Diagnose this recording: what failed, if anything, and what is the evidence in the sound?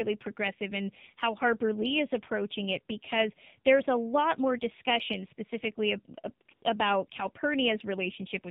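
The speech passed through the AMR narrowband mobile codec, a codec-stage failure that holds for the whole clip. Everything above 4 kHz is gone, so the speech sounds muffled and boxed-in. The codec rebuilds the voice from a vocal-tract model excited by a handful of pulses per 5 ms subframe, and here that model is starved: the buzzy, synthetic edge is plainly audible, which fits one of the low AMR modes, around 7.4 kbps.

A second fault sits in the call processing: AMR comfort noise appears twice. The sender's discontinuous transmission judged the talker silent and stopped sending speech frames, first for 20 ms at 6.455 to 6.475 s, then for 80 ms at 6.535 to 6.615 s. In each gap the receiver substituted smooth synthetic noise built from a coarse level and spectrum estimate, so the real background drops out and a flat hiss switches in and out.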